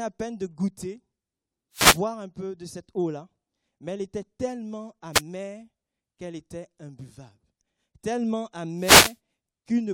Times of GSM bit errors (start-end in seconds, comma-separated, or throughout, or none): none